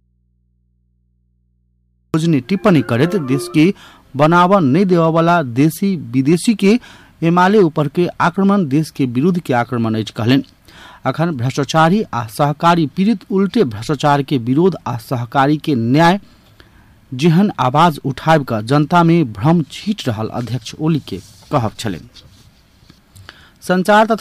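From the start to 2.14 s, an audio dropout to a faint residue. Only mains hum remains, roughly 45 dB below the signal, likely from an open input.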